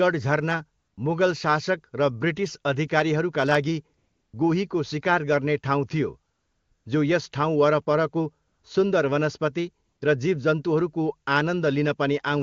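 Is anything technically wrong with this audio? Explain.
Yes. AMR comfort noise fills five pauses: 0.79–0.97 s, 3.97–4.33 s, 6.33–6.85 s, 8.47–8.63 s and 9.85–10.01 s. Each time, the phone judged the talker silent and stopped sending speech frames, so the receiver substituted smooth synthetic noise, audibly switching on and off.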